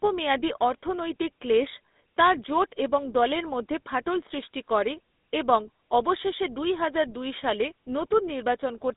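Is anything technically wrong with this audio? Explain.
Yes. Throughout the speech there is GSM full-rate codec damage. A vocal-tract filter driven by sparse, regularly spaced pulses rebuilds the voice, which fits 13 kbps, within a 250 Hz to 3.7 kHz band. Plain band-limiting would sound muffled but smooth. This sounds buzzy and gravelly.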